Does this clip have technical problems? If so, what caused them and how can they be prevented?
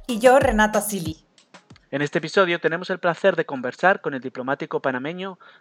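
Yes. At 1.12 s the input likely switched to a poorer device. The spectrogram goes empty above 8.5 kHz, and the waveform drops about 5 dB with no gap. To prevent this, fix the recording input to one device and turn off automatic switching during capture.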